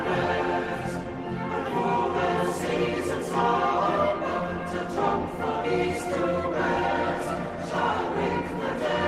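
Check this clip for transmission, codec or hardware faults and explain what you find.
Nothing in the clip points to a transmission, codec or hardware fault. No event stands out that would need a time or an explanation.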